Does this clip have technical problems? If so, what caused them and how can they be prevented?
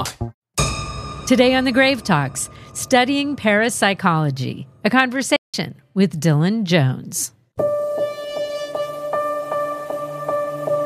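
Yes. A playback stall at 5.36 to 5.54 s cuts the sound off mid-flow, leaving 0.17 s of silence before it resumes, likely because the player ran short of buffered data or its output thread was briefly blocked. A larger playback buffer and higher priority for the audio thread would prevent it.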